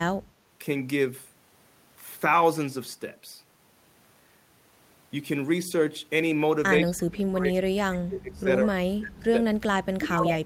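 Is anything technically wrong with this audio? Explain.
Yes. From 6.8 s to the end, the speech drops away by around 30 dB at its deepest, which is speech suppressed in double talk, likely from an echo canceller attenuating near-end speech it mistook for echo.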